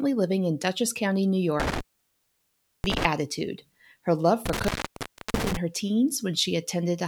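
A speech clip with intermittent contact, twice. From 1.60 to 3.05 s, and again from 4.46 to 5.57 s, the signal drops out, for about 1.04 s and 0.66 s. Crackle marks each break's edges and faint hiss fills the gaps. A loose plug or cable is briefly opening the line.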